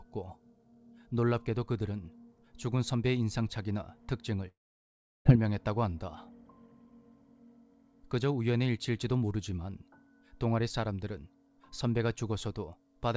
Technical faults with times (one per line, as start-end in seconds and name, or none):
4.48-5.27 long network dropout